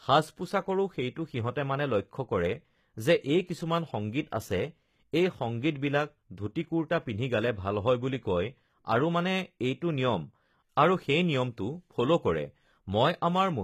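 HE-AAC compression, throughout: the treble is likely rebuilt by band replication at a low bitrate, so s sounds turn gritty and metallic, with nothing above 14.9 kHz.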